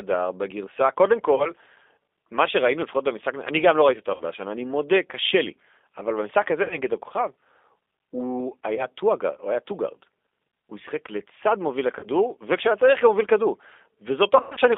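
Throughout, the speech sounds narrow, slightly rough and synthetic, confined to roughly 250 Hz to 3.6 kHz with plainly audible coding damage. That fits the G.729 codec in its 8 kbit/s G.729A form, rebuilding the voice from a vocal-tract filter, pitch predictor and sparse pulses.

At 1.36–1.49, 4.14–4.24, 6.63–6.79, 8.75–8.86, 11.99–12.07 and 14.37–14.59 s, the voice briefly smears into a buzzy tone or coloured noise that fades, and stays weak afterwards. This is VoIP packet loss concealed by the speech codec. Lost stretches were 20, 60, 80, 20, 40 ms, then 160 ms scattered over 200 ms, with the longest run 100 ms. The decoder extrapolated from its last pitch and filter, then recovered slowly.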